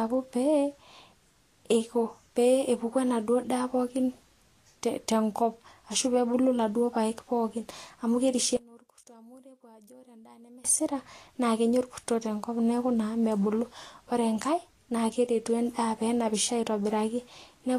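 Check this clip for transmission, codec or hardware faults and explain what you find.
Two faults are present: lossy coding damage across the whole clip, and a polarity problem in one stereo channel for about two seconds.

Vorbis compression at a low setting is the likely cause of damage heard throughout this speech. The encoder has discarded everything above 14.1 kHz and quantised the remaining treble coarsely, which fits a bitrate of roughly 36 kbps. Fine detail turns to hiss and grain, and consonant attacks blur.

One channel inverted is the likely cause of a collapse from 8.57 to 10.65 s, just after "amu kerishie". With one channel's polarity flipped, the shared centre content cancels when the channels are summed to mono. The level drops by about 26 dB, leaving only a faint residue.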